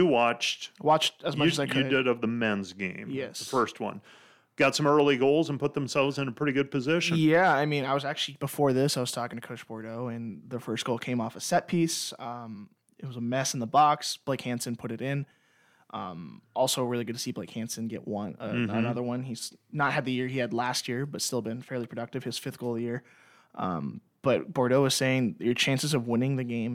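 At 3.36, 9.33, 15.31 and 21.29 s the speech skips forward by roughly 20 ms, with no silence: audio missing between chunks, likely from a recorder working in 6 s blocks. The strict 6 s spacing separates it from random dropouts.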